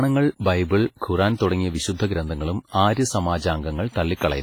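Speech, carrying heavy transform-codec damage from start to finish. It has a ringing, washy character, with a hiss that swells and fades along with the speech, and weak detail between the stronger components sounds hollowed out. This points to WMA compression, likely at a low bitrate around 24 kbps, where long transform blocks smear quantisation noise over tens of milliseconds and the encoder drops low-level spectral lines entirely. A pre-echo sits at 1.35 to 1.40 s. A hiss runs for about 52 ms ahead of a sharp onset, and the attack itself sounds softened and smeared. The attack lands late in a transform block, so the codec spreads noise sized for the loud onset evenly across the whole block, and that noise fills the quiet stretch before the attack, where nothing would otherwise mask it.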